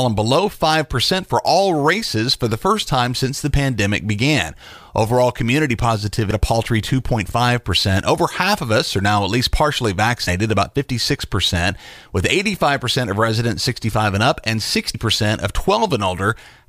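Damaged data in the compressed speech stream makes the decoder misread a frame and lose sync until the next header, leaving a brief blip at 6.30 s before "a paltry", at 10.27 s after "now at least partially", and at 14.93 s after "and up and".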